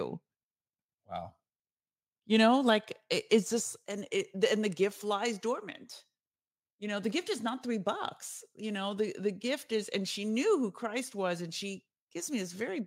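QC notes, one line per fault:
No faults found in this speech recording. Nothing in it calls for a QC note.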